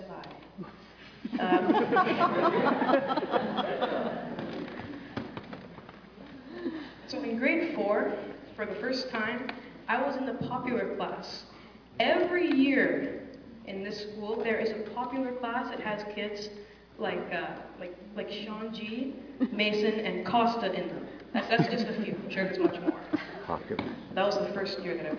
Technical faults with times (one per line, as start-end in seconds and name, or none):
none